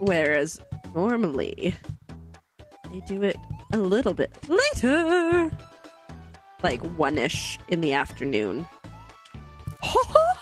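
Nothing stood out as a technical problem on listening.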